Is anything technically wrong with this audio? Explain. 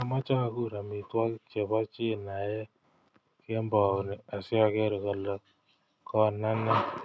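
No, nothing is technically wrong with this audio.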